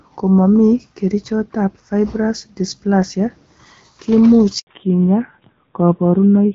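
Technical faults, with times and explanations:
4.59 to 4.67 s, handover gap: The sound dies away within a few tens of milliseconds and stays silent for 80 ms before resuming. The call was passed from one network to another, and no speech frames arrived during the switch, so that stretch is lost.
4.67 s to the end, fallback to narrowband: From here the speech is duller and rougher, with nothing above 4 kHz, unlike the clearer wideband sound before the gap. The call dropped from HD Voice to an older narrowband codec, and the added roughness fits a low-rate mode around 7.4 kbit/s.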